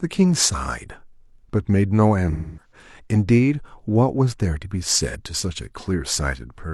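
At 2.32 s the speech turns into a smeared, noisy patch lasting until about 2.72 s, with roughly a quarter-second of audio lost, which fits about six lost AAC frames. A second, brief smear at 5.09 s loses about 43 ms, the length of a single frame. This is AAC frame loss with concealment: the decoder patches each gap from the last good spectrum. Unlike a plain dropout, the gap is filled with blurred, phasey sound rather than clean silence.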